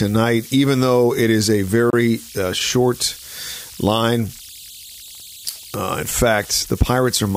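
Converter idle tones run through the whole clip: an undithered delta-sigma converter settles into repeating bit patterns, leaving a whistle around 4 kHz, about 22 dB below the speech. At 1.90 s, a Bluetooth stall cuts the sound to 30 ms of silence before it resumes, likely because interference delayed packets and the headphone buffer ran empty.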